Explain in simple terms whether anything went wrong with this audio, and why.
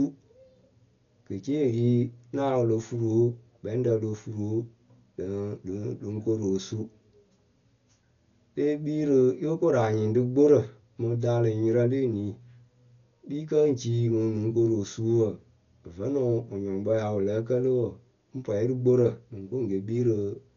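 Something did go wrong, and it lasts the whole clip: the speech sounds dull and muffled, with a rough, fluttering hiss clinging to the voice. Nothing comes through above about 7 kHz, so the crisp edges of sounds like s and t are missing. The likely cause is heavy Dolby Digital compression, a codec that squeezes audio by dropping the top of the range and replacing detail it couldn't afford with filler noise.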